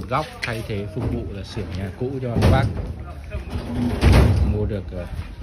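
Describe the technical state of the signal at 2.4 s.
At 2.4 s the signal is intact, with no dropout, distortion or other fault to be heard.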